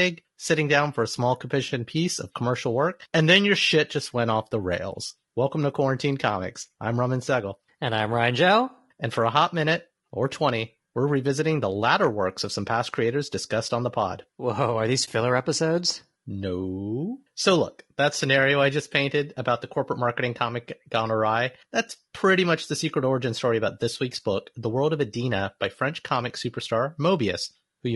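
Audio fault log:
throughout  low-delay AAC compression: the speech sounds rough and grainy, with noise filling the gaps between pitch harmonics and a thin, synthetic top band. This likely comes from a low-delay codec such as AAC-ELD at a low bitrate, around 32 kbps. Its short frames blur harmonic detail rather than adding the swirly, watery artefacts of ordinary long-frame compression.
15.05–15.08 s  AAC frame loss with muting: just after "are these", the sound dips briefly and comes back, with about 20 ms lost, which fits one lost frame whose spectrum the decoder zeroed. The overlapping windows soften both edges, leaving a smooth brief dip, unlike a hard sample dropout.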